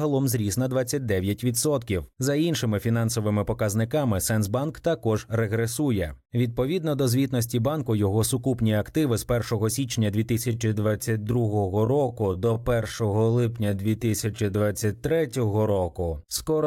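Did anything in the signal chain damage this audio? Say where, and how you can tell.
Yes. From 10.40 s to the end, the speech drops abruptly to about 0.69 times its earlier pace, yet its pitch stays exactly where it was. That is a time-stretched section, likely from a software stage that lengthened the audio to fit a duration by repeating short pieces. A sample-rate mismatch or slow playback would have lowered the pitch along with the pace, and here the pitch does not move.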